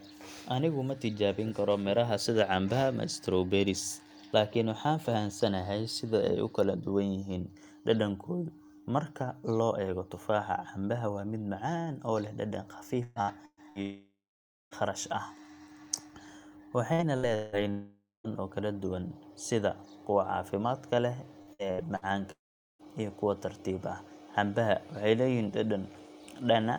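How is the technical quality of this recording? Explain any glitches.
The recording has a recurring network problem: three bursts of choppy audio, each followed closely by a full dropout, with the last dropout overlapping the end of its burst.

Repeated packet loss (robotic sound) runs from 13.03 to 13.79 s, 16.93 to 17.55 s, and 21.42 to 22.88 s, ending right before "iyo kuwa tartiib ah". Packets kept going missing, and the receiver filled each hole by stretching the last bit of sound. That gives a choppy, robot-like speech. The first two spans are about half patched-over sound, with gaps up to 124 and 177 ms. The third is lighter, at around 16%.

Long network dropouts hit at 13.82 to 14.74 s, 17.70 to 18.27 s, and 22.31 to 22.82 s. They're likely caused by the stream stalling outright for roughly 0.9, 0.54 and 0.48 s. Each one starts as a fading buzz or hiss carried over from the last sound, then drops to silence (about 0.54, 0.17 and 0.41 s of it). 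The speech resumes with that chunk gone.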